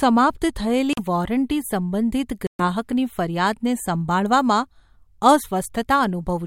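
Speech drops briefly to silence at 0.93 to 1.01 s (about 42 ms) and 2.47 to 2.62 s (about 127 ms), then resumes: likely Bluetooth stalls, the headphone buffer running dry awaiting resent packets.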